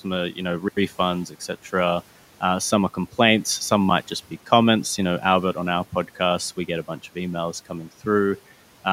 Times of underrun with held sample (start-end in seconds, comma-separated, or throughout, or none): 0.68-0.77